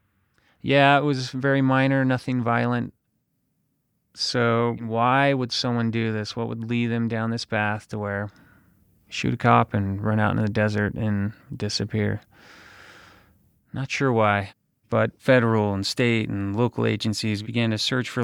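No faults detected across the speech recording; nothing audible to report.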